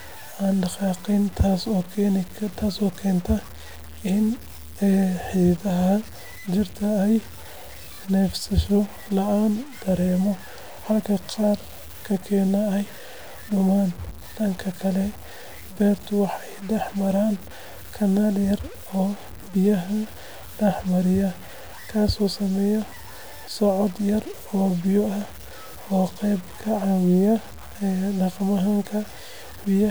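Throughout the speech, quiet passages turn grainy, with distortion that tracks the signal about 20 dB below it and low-level tails sputtering into silence. This is likely low bit depth without dither: truncation to very few steps, consistent with roughly 6 bits.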